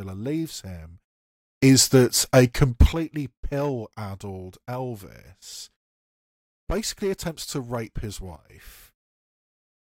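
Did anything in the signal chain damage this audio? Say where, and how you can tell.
Yes. A sudden gain jump, likely from an unramped digital gain change, lifts level about 13 dB from 1.63 to 2.93 s, before "pill addled", and drops about 12 dB from 8.36 to 8.50 s, after "attempts to rape his". Background noise steps instantly with the speech, which rules out a compressor's gradual attack and release.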